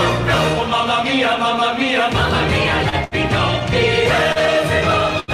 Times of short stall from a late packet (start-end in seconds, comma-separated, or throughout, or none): 2.89-3.14, 4.32-4.39, 5.20-5.31